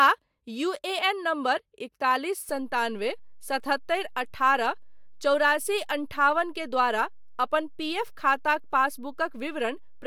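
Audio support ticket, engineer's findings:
Low thump at 2.49 s, speech continues unchanged through it. DC step: waveform zero line jumps to an offset of about -40 dBFS and holds to the end of the clip, no return or decay. Likely cause: converter recalibration or an offset input switched into the path mid-recording. The thump is the step edge; the sustained offset itself is inaudible but eats headroom.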